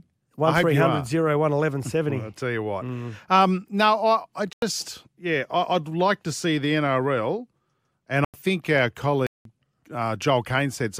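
Corrupt frame muted at 4.53 to 4.62 s, just before "yeah I would like", at 8.24 to 8.34 s, just before "think our", and at 9.27 to 9.45 s, just after "think our": damaged compressed frames were rejected by the decoder and replaced with silence, leaving abrupt gaps of about 0.09 to 0.19 s.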